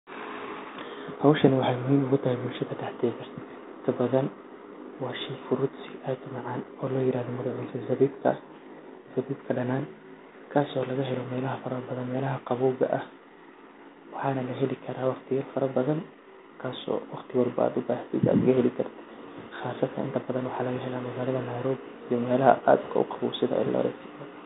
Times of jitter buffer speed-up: none

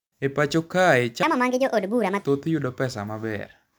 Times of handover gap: none

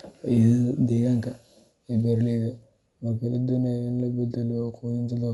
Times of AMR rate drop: none

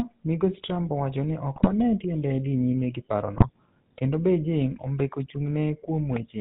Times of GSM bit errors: 1.56-1.68, 3.36-3.47

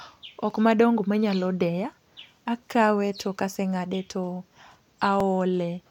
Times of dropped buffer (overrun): 0.50, 5.20

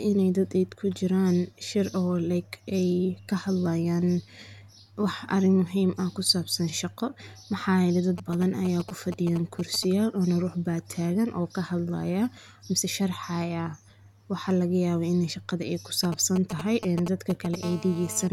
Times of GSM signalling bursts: 8.18-9.85, 16.04-17.55

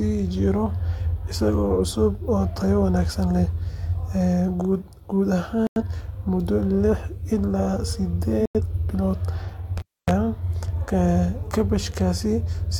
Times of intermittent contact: 9.77-10.11

